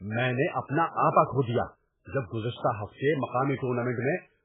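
Speech with a dull, watery, swirling quality throughout and nothing above 3.8 kHz, likely heavy MP3 compression at a very low bitrate, consistent with about 8 kbps.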